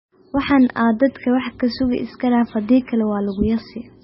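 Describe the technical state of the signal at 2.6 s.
At 2.6 s the speech carries heavy MP3 compression damage, present across the whole clip rather than at this moment alone. Nothing is audible above about 5.6 kHz, a fixed treble cutoff consistent with a very low bitrate of around 17 kbps, likely from an MP3 encode. With so few bits, weak frequency lines drop in and out between frames, giving a watery, swirling texture, metallic chirps on s sounds, and smeared consonant attacks.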